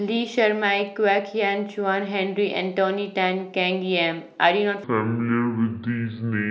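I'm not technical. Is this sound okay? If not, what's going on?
No. From 4.84 s to the end, there's a section at the wrong speed. The speech plays at 0.6 times normal, so it drags and drops nearly an octave deeper. Pace and pitch shift together, unlike a pitch change alone, which most likely points to a wrong playback clock.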